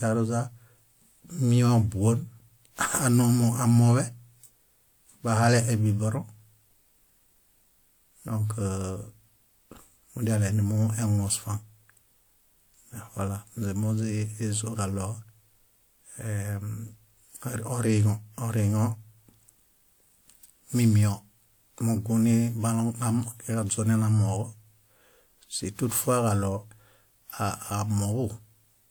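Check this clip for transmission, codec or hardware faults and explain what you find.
One codec fault runs through the whole speech clip: generation loss. It is present from start to finish. The speech sounds swirly and hollow, and consonant attacks are smeared. The cause is likely repeated lossy re-encoding, around five passes. The character points to WMA at about 128 kbit/s. Each pass quantises again on a shifted frame grid, so noise and spectral holes stack up. The top end stops near 20.1 kHz.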